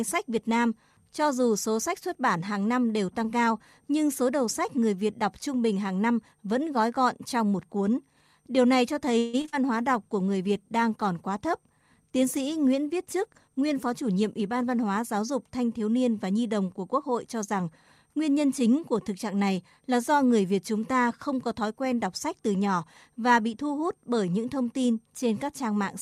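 From 9.18 to 9.55 s, just after "này cho", repeated packet loss (robotic sound) breaks the speech into four gaps, the longest 150 ms, filled with stretched continuation. A call bitrate drop follows from 9.77 to 14.92 s, the encoder falling from 64 to 22 kbps, so the speech turns coarse, watery and dull. Within that stretch, from 13.06 to 14.49 s, a jitter buffer speed-up trims roughly 150 ms of pitch periods, and the speech runs about 8% faster at unchanged pitch, sounding slightly hurried.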